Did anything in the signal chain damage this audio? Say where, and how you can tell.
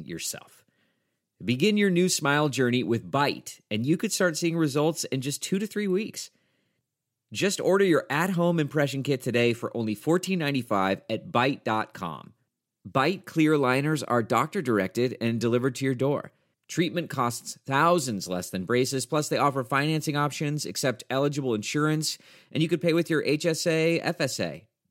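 No, nothing in the signal chain has damaged this speech. No stage from capture to playback leaves any audible mark on the sound.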